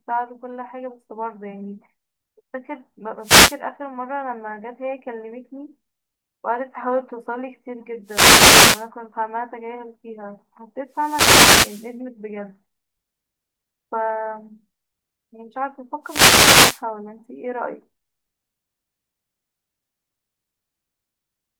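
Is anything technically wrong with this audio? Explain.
Yes. Four wireless microphone noise hits occur, at 3.20–3.60, 8.04–8.89, 10.91–11.96 and 16.03–16.83 s. In each, the FM radio link fades as reflected signals cancel, so receiver noise surges over the speech as a brief swish of static. Unlike a digital dropout, the sound is swamped by hiss rather than falling silent.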